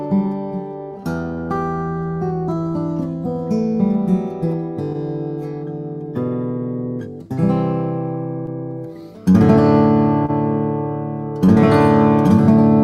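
Clock drift between sender and receiver runs through the whole clip: the sender's clock runs roughly 1.5% slow, so the receiver's buffer keeps draining and needs constant correction.

Repeated timing corrections from 0.26 to 9.02 s repeat short pieces, slowing playback to 99% and adding roughly 150 ms overall, heard, if at all, as slight hiccups or an unsteady tempo.

A short stall from a late packet at 10.26 to 10.30 s holds the last sound for 27 ms while the buffer sits empty, then resumes without losing anything.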